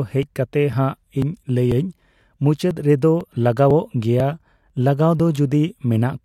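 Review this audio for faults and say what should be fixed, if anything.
Periodic USB or driver dropouts tick through the speech from 0.23 to 6.19 s, every 0.496 s. Each skips a few milliseconds of audio. Isolate the interface from busy USB devices and disable background tasks that poll the driver.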